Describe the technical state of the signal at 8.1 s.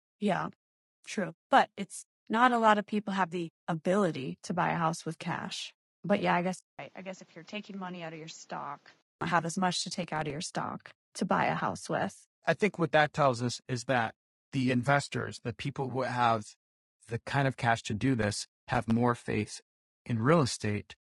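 At 8.1 s the speech sits inside a stretch from 6.59 to 9.21 s, between "yeah I" and "have as much to", where the input was likely switched to a poorer device. A 200 ms silence marks the switch. After it, nothing passes above 7.6 kHz, the level falls by around 10 dB, and a new background noise sits roughly 30 dB under the speech. Unlike codec damage, this dull, quieter sound begins and ends abruptly with the device change.

Over this, and through the whole clip, runs a rough, grainy texture from low-delay AAC compression, likely AAC-ELD at a low bitrate near 32 kbps. At this low bitrate, noise fills the gaps between the voice's harmonics. This graininess runs on across the switch, while the device's band limit does not.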